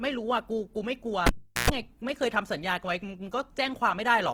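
Throughout the speech, the tone is rough and grainy, with a noisy edge on every sound. The damage is plainly audible. This is likely Opus compression in its music mode, which fits a low rate of around 16 kbps. Bands starved of bits are refilled with folded or noise content.

At 1.27 s, the cable is pulled and plugged in again. A pop cuts the audio. The unplugged gap lasts about 385 ms, mostly near silence, and within it a 60 Hz mains buzz sounds for about 118 ms while only the tip touches. A second pop at 1.70 s brings the sound back.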